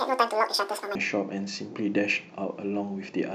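It's a speech clip, and the first 0.95 s has audio read two samples at a time (double speed). The playback side is taking each pair of samples as a single frame, as if it expected two channels or samples twice as wide, so that opening stretch runs at 2x speed and jumps a full 12 semitones, an octave up.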